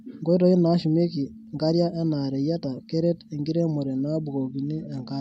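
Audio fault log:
4.44–5.20 s, Bluetooth SBC bit pool drop: from 4.44 s to the end of the speech, the high frequencies collapse and a gritty, granular noise rides under the voice. The encoder was starved of bits, so the upper sub-bands received little or nothing and the remaining bands were quantised coarsely. The degree of dulling fits a bit pool cut from 28 to 11, around 90 kbps. The clip ends before the rate recovers.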